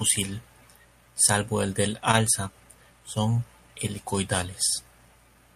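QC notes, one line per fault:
2.11–2.15 s, short stall from a late packet: right after "salvo el del" a packet arrived late, so the receiver stretched the last bit of speech by about 18 ms until it landed. Nothing's lost, but that sound hangs a touch long, with a faint buzzy dip.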